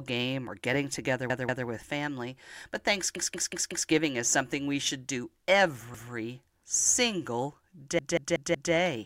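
Playback of this speech recording repeatedly ran dry, so the device replayed its last buffer of about 186 ms, which fits an 8192-sample buffer. The result is a repeated buffer stutter with hard joins: at 1.3 s after "or getting together" (three plays), at 3.16 s before "is something we should" (five plays), at 5.94 s (twice) and at 7.99 s (five plays).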